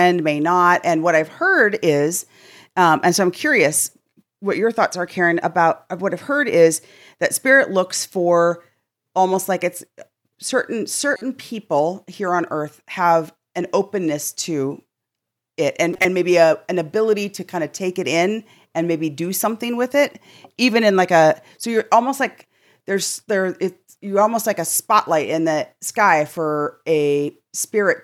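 Two short bursts of chirpy, squeaky noise cut across the speech, one from 11.11 to 11.22 s and a louder one from 15.94 to 16.05 s whose error peaks about 10 dB above the first. Both are corrupt frames decoded: flipped bits in a handful of consecutive compressed frames were played as if valid, so misread gains and codes scattered energy into the wrong frequencies for roughly a tenth of a second each time.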